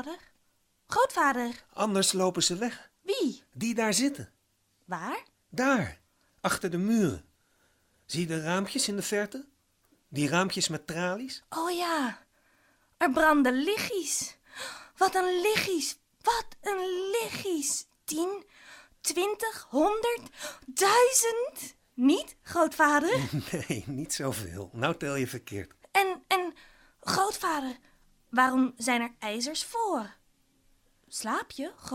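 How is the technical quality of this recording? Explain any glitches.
No glitches to explain: nothing in the recording points to a technical fault.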